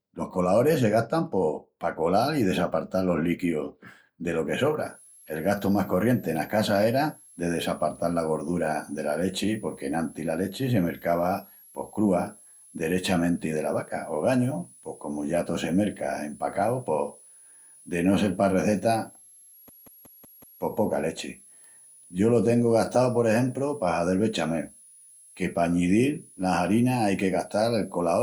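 From 4.8 s to the end of the speech, a switching supply whistle sits roughly 30 dB below the signal, a thin high tone that wanders between 9.66 and 12 kHz around 10 kHz, as a power supply's audible burst mode or beating with another supply leaks into the audio path.

From 19.69 to 20.62 s, a system hang loop replays one 185.8 ms slice five times at 5.38 Hz, a machine-gun stutter. The host froze while the audio hardware kept cycling its ring buffer, whose length fits an 8192-sample buffer.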